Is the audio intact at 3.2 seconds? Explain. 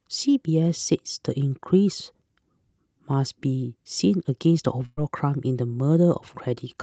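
Yes, the speech is intact at 3.2 seconds, with no dropout, glitch or distortion at that moment beyond the ordinary coding of the WebRTC call path, whose Opus codec keeps the audio band-limited to about 8 kHz.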